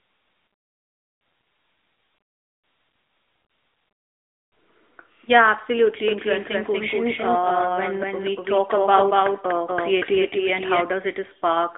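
The speech has gone through the AMR narrowband mobile codec for the whole clip. It keeps a vocal-tract model and a few pulses per frame, so the voice sounds buzzy and synthetic. Nothing passes above 3.8 kHz, the line band runs roughly 300 Hz to 3.6 kHz, and the plainly audible damage fits a mid-rate mode near 10 kbps.

From 6.08 s to 10.82 s there is a doubled audio track, likely from a slower second capture path mixing the same signal back in. A full-band copy about as loud as the original trails by about a fifth of a second, with no decay or room colour, and it starts and stops abruptly.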